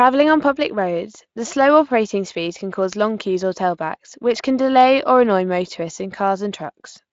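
Nothing in this speech stood out as a technical fault on listening.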